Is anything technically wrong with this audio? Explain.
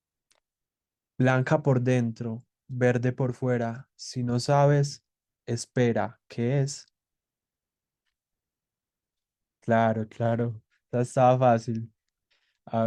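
No, nothing is technically wrong with this speech recording. No problem in it calls for an explanation.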